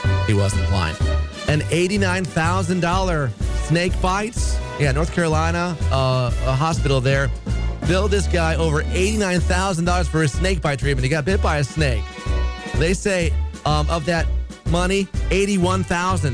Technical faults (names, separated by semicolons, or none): none